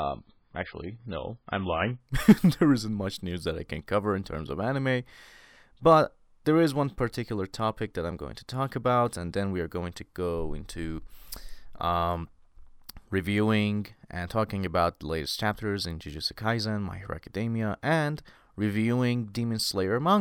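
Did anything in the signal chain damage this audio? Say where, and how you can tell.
Yes. An adaptive stream starting at a low bitrate damaged the first 2.0 s: the speech is dull and smeared, with nothing above 5.1 kHz, fitting a very low-bitrate MP3. A spectrogram shows a flat ceiling that jumps abruptly to a much higher ceiling at 2.0 s, where the stream steps up to 128 kbit/s MP3, with no gap in the waveform.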